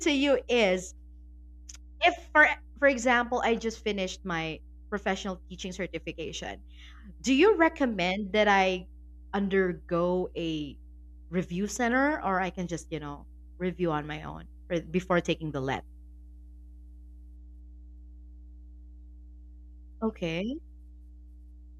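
A speech recording with mains hum running from start to finish: a steady low tone at 60 Hz, sitting roughly 20 dB below the speech, that points to a ground loop or a nearby transformer leaking the power line into the signal. It is a fixed pitch that never moves with the talker, which sets it apart from wind or handling rumble, a shifting, unpitched low-end noise.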